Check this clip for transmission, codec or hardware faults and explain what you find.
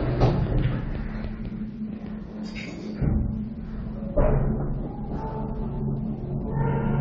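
One codec fault runs through the whole clip. The sound is dull and smeared, with a plainly audible warbling, fizzy texture and nothing above 8.3 kHz. This is likely AAC compression: starved of bits, which fits around 32 kbps, the encoder drops high frequencies and coarsely quantises what remains.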